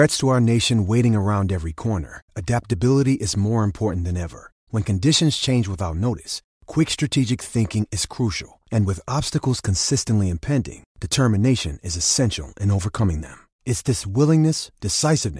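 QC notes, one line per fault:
No faults to note.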